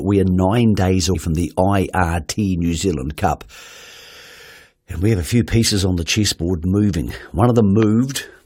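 At 1.14 s, between "we are nine days" and "from the", a brief garbled blip interrupts the speech. This is damaged data in a compressed stream: the decoder misreads corrupted frames and has to resync.

From 7.83 to 7.85 s a single loud pop, roughly 10 dB above the speech, lands on top of the audio while the speech carries on beneath it. The likely cause is a sudden voltage step, from a plug, switch or static discharge, added to the signal.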